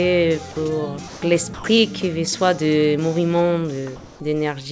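From 1.08 to 1.22 s, comfort noise in place of the background, likely from discontinuous transmission: the real background, about 19 dB below the loud parts, becomes 140 ms of steady, featureless noise about 1 dB quieter. At 1.54 to 1.64 s, sound dropped by the voice detector, which likely misjudged it as background, loses about 90 ms of sound to synthetic noise. From 3.96 to 4.20 s, comfort noise again replaces a background about 26 dB down, for 240 ms and about 1 dB louder. Throughout, nothing above 8 kHz comes through, which fits a wideband call codec.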